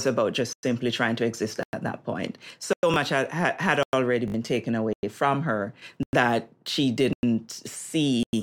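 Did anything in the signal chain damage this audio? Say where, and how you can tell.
Yes. The first fault is a gap between chunks, introduced at the storage or playback stage. Hard-edged silences of 100 ms start at 0.53, 1.63, 2.73, 3.83, 4.93, 6.03, 7.13 and 8.23 s. Each hole after the first follows exactly 1.0 s of speech, so the pattern repeats every 1.1 s. That regularity points to audio handled in one-second chunks, with padding or a late start inserted at each join. The speech is interrupted but not lost.

The second fault is a repeated buffer, introduced at the driver or buffer stage. At 2.94 s and again at 5.80 s, a 20 ms slice plays twice, which is heard as a click-like stutter. At 4.28 to 4.34 s, the same 20 ms buffer plays four times in a row, giving a brief buzz. In each case new data missed its deadline and the device replayed what it already held. This cost roughly 20 ms of real audio at the single repeats and around 70 ms at the longer one.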